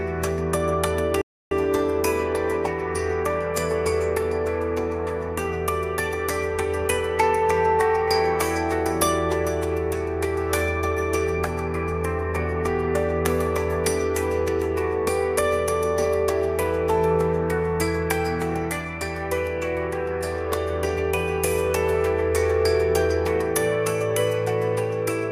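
At 1.22 s the audio halts for about 0.3 s, then picks up exactly where it left off. That is a rebuffering stall. The player drained its downloaded audio and waited for more. Unlike a dropout, nothing is skipped; the gap only adds time.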